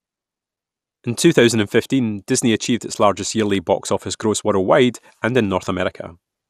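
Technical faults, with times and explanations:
throughout MP2 compression: likely low-rate MPEG Layer II coding, consistent with about 80 kbps, starves upper sub-bands of bits, leaving plainly dull, gurgling, granular sound.
1.23 s DAB burbling: reception bit errors at roughly 0.15% slipped past error correction into the MP2 data across 6 frames, corrupting samples and causing brief blips of noise in single sub-bands.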